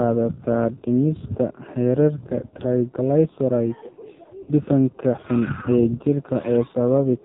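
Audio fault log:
Throughout: AMR narrowband mobile codec. Speech sounds buzzy and synthetic, with nothing above 3.8 kHz, which fits a low bitrate near 5.9 kbps.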